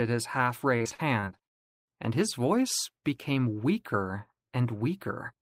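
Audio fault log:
0.77–1.91 s, repeated packet loss (robotic sound): the speech turns choppy, with rapid dropouts up to 42 ms long. Lost or late packets were patched by stretching the preceding sound, covering about a quarter of this stretch.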